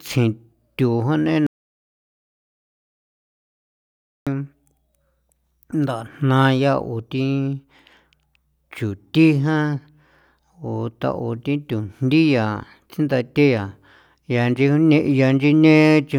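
An audio dropout to silence runs from 1.47 s to 4.27 s, right after "tsjintu ja". The speech stops mid-flow and 2.8 s of dead silence follows, with no room tone, before it resumes. The input was likely lost while recording kept writing silence.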